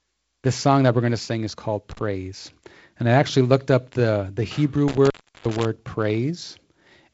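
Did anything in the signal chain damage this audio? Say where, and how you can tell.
Yes. The sound drops out with crackle at the edges just after "to sing is called", at 1.91 to 1.99 s, for about 35 ms, and again from 4.88 to 5.65 s, for about 355 ms. This is intermittent contact in the analogue wiring: a loose plug or cable briefly opening the circuit.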